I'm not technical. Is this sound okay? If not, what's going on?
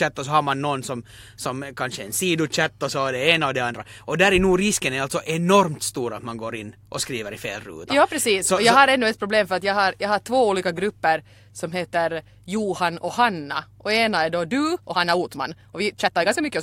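No. From about 14.55 s to the end of the clip at 16.62 s there is a time-stretched section: the speech suddenly runs about 1.44 times faster, yet the pitch of the voice stays the same, so it sounds rushed. The likely cause is software squeezing that stretch of audio to fit a shorter length, keeping the pitch by cutting out many tiny slices of sound, which is what produces the hurried quality.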